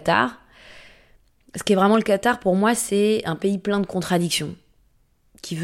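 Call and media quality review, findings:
Loud pop, 1.94–1.97 s, just after "qu'est vraiment". Single sharp pop, peak a few dB above the speech, which continues underneath. Likely a transient voltage step from a connector, switch, static discharge or driver glitch. Downstream circuitry shapes it into a brief click-thump. Check cabling and the capture device.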